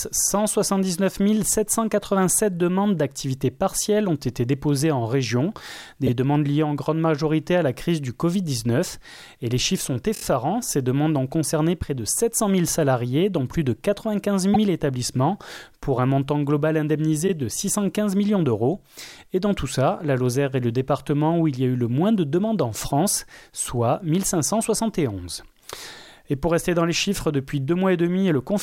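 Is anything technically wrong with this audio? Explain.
Yes. Repeated frames occur at 6.06–6.09 s, 10.14–10.21 s, 14.53–14.58 s and 17.27–17.30 s: a block of compressed audio, 24 ms long (48 ms at 14.53 s), was stored or sent more than once, so it replays. This is heard as a brief stutter, three extra repeats at 10.14 s.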